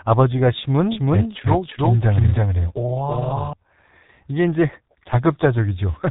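Throughout, the speech sounds muffled and hoarse, with smeared consonants and nothing above 3.8 kHz, the heavy damage of a G.723.1 codec at around 6 kbit/s.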